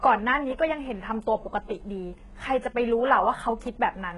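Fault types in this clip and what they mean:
HE-AAC compression: The speech sounds heavily coded throughout, with a bright but synthetic top end where s sounds come out gritty and lispy. That points to a very low bitrate, around 12 kbps, and most likely to HE-AAC, which codes only the lower band and rebuilds the treble by copying lower harmonics upward. On a spectrogram the upper band looks like a smeared, repeated copy of the lower harmonics, misaligned at the crossover, with nothing above 11.3 kHz.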